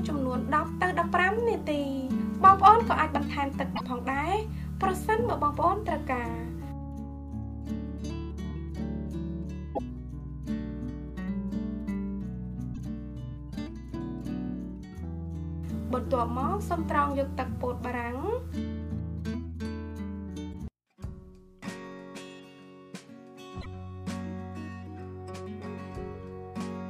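Five short bursts of damaged data in a compressed stream occur at 3.75–3.81 s, 9.73–9.79 s, 12.71–12.78 s, 20.49–20.55 s and 23.60–23.66 s, each lasting roughly 55 to 70 ms. At each point a stretch of the encoded stream is corrupt, so the decoder cannot interpret those frames and must resynchronise on the next valid header. Each event is heard as a brief chirp, squawk, click or short hole breaking through the audio.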